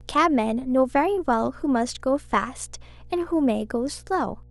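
Mains hum runs from start to finish beneath the speech, a steady low tone at 60 Hz sitting roughly 25 dB below the talker. The power line has leaked into the signal path, most plausibly through a ground loop between connected equipment or stray magnetic field from a nearby transformer. It sounds like a constant low drone with some low harmonics, unchanging through pauses and speech alike, most exposed in the gaps between phrases.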